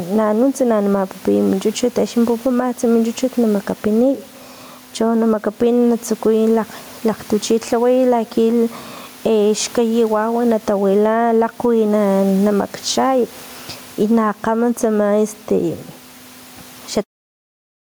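Gain pumping runs through the whole speech clip. The gain swings by around 10 dB. Loud and soft parts sit close together, squashed. The likely cause is gain set too high, with a fast limiter clamping down.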